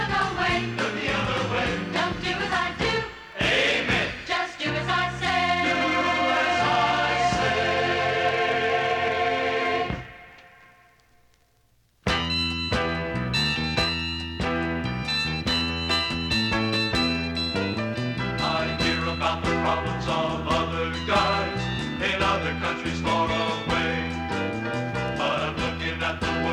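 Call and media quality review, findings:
No call or media quality faults found in this clip.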